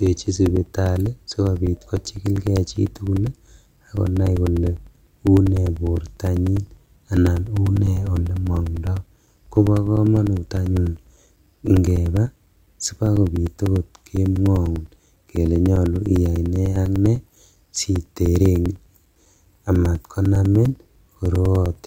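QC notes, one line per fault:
0.06–21.76 s, periodic USB or driver dropouts: every 0.1 s a few milliseconds of speech vanish and are replaced by silence, as something blocks the audio path on a fixed schedule. The result is an even ten-per-second ticking that is heard only where speech is present.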